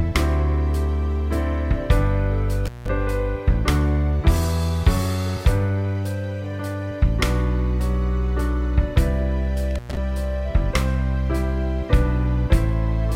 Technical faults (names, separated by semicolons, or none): intermittent contact